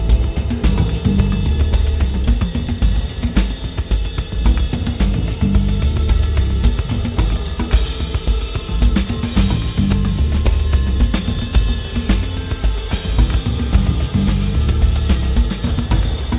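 No faults are audible; the audio comes over a WebRTC call path with nothing above 4 kHz, which fits G.711 A-law.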